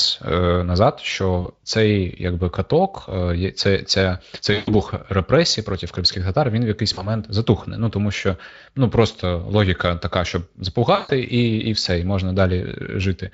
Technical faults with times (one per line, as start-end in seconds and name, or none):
1.41-1.47 VoIP packet loss concealed by the speech codec
4.53-4.74 VoIP packet loss concealed by the speech codec
6.93-7.13 VoIP packet loss concealed by the speech codec
10.95-11.10 VoIP packet loss concealed by the speech codec